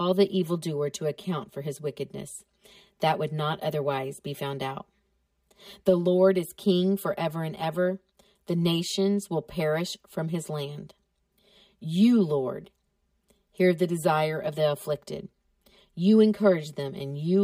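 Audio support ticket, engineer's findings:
Channel delay (comb filtering) throughout the speech. Hollow, phasey tone. One channel lags roughly 5 ms before mono sum. Cancellations form fixed notches, first near 100 Hz, evenly spaced above.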